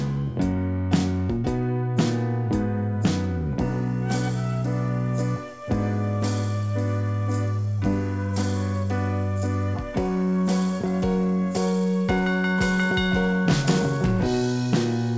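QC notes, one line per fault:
No fault to note.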